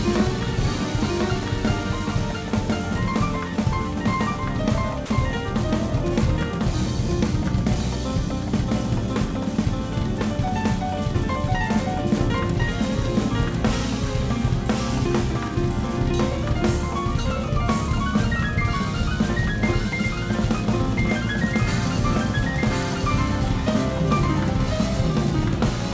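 A doubled audio track runs through the whole clip: a second, full-band copy of the sound trails the original by roughly a second, at about the same level. It has no reverberant tail or room colouring and keeps a fixed offset, so everything is heard twice. This is likely a second capture through a slower path, or an edit that left two unaligned copies in the mix. Both copies share the G.722 call path's band limit, with nothing above 8 kHz.

From 5.06 to 5.10 s, the sound is dropped by the voice detector. For 40 ms it is replaced by steady low-level comfort noise, then returns. The likely cause is the sender's voice activity detector classing that stretch as background and pausing transmission, with the receiver filling the gap with generated noise. At this length it is heard as a brief flat-noise hole in the sound.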